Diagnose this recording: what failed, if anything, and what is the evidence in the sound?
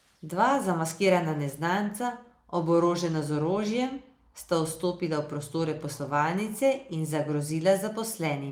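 Nothing in the recording points to a failure at any stage of the chain. The speech continues without any audible event that would call for a diagnosis.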